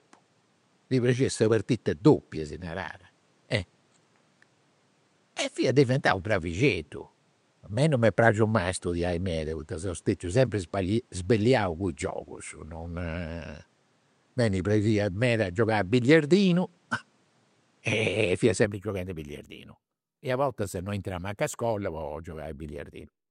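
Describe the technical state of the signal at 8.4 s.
At 8.4 s the speech sits inside a stretch from 0.0 s to 18.65 s where the band stops at 10.5 kHz, with a noise floor roughly 40 dB down and a level offset of about 5 dB. This likely reflects an input switched to a poorer device, which gives way without a gap just before "gioghendi a billiardinu".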